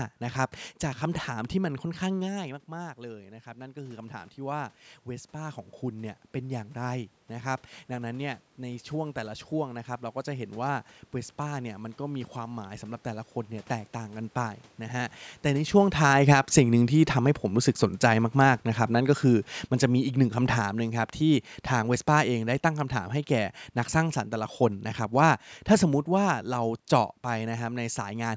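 Around 2 s the talker drops by about 15 dB. Automatic gain rising then lifts the level by about 9 dB from 2.41 to 10.54 s, swelling speech and room noise together. After the talker moves again around 15.5 s, automatic gain falling pulls the level down by about 11 dB from 15.47 to 24.26 s, so everything sinks slowly together.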